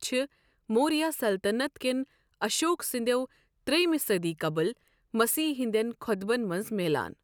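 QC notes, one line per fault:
No faults found in this clip.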